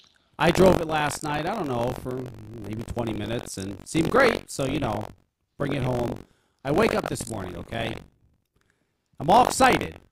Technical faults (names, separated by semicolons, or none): buffer tearing